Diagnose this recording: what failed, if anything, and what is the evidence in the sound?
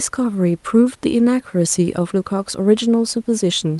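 Nothing has failed: the speech comes through the WebRTC call path intact, with a top end that stops near 12 kHz, consistent with an Opus codec running at around 40 kbps, and the room noise sits about 41 dB below the speech.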